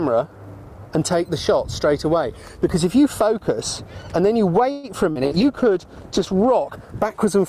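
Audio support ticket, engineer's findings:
Call audio freeze, 4.71–4.86 s. Sound stalls and the last sound is stretched into a fading buzz/hiss for about 120 ms. Likely cause: delayed packets draining the jitter buffer. Playback then resumes where it stopped, so nothing is lost, but everything after runs about 120 ms later. Distinguishing mark versus packet loss: an inserted pause with no content missing and a lasting delay shift, rather than a skipped fragment.

Short concealed packet loss, 5.11–5.18 s and 5.27–5.34 s. Each is a brief smear or wobble where about 40 ms never reached the decoder and was synthesised from the preceding sound before blending back. Distinguishing mark versus freeze: the real audio in each hole is gone, not delayed, and timing does not shift. The second coincides with the bitrate drop onset.

Call bitrate drop, 5.27–6.61 s. Encoder rate falls from 48 to 14 kbps and stays at the floor for about 1.27 s. 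Component: Opus encoder following a collapsed bandwidth estimate. Coarser coding plus lost high frequencies make the sound rough, watery or muffled. Distinguishing mark versus loss: a sustained change in tone colour across the whole span, not a momentary glitch, with clarity returning once the rate recovers.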